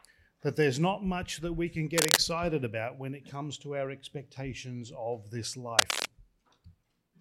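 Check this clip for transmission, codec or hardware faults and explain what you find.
There are two bursts of cable scratch noise, from 1.97 to 2.18 s and from 5.79 to 6.05 s. Each lasts roughly a fifth to a quarter of a second and sits about 5 dB above the wanted sound. The dense, irregular scratching and rustling rides over the audio. The likely cause is a worn cable, connector or control being moved, so its contact resistance fluctuates rapidly and injects ragged noise into the signal path.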